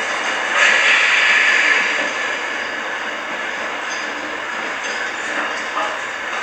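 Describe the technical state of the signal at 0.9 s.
At 0.9 s the signal is intact, with no dropout, distortion or other audible fault at that moment.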